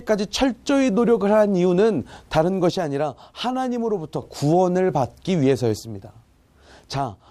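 At 2.70 to 4.22 s, and again from 5.80 s to the end, the speech drops abruptly by about 6 dB, likely one channel dropping out before the mono sum.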